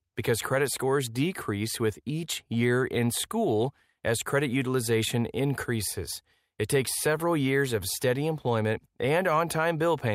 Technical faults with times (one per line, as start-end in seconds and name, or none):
none